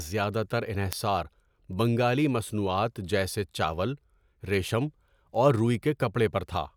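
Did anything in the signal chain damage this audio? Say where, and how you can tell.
Yes. The fault sits at the digital link between two devices: the receiver runs on its own clock, not locked to the sender's, so the two drift apart by roughly 50 parts per million. Each time they slip a sample, one sample is dropped or repeated. The result is word clock ticks: sharp, uneven clicks about every 0.4 s, around fifteen in all, running from 0.12 s to 6.55 s under the speech.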